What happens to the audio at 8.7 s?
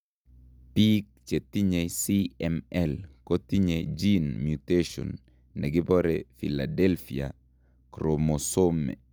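Nothing goes wrong at 8.7 s; the speech carries on intact through that moment with no dropout, click or distortion.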